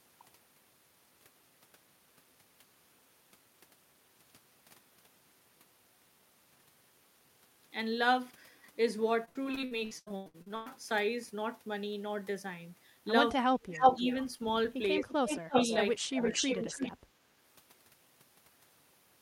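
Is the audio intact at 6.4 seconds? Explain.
Yes, the speech at 6.4 seconds is intact, with no fault to be heard at that moment.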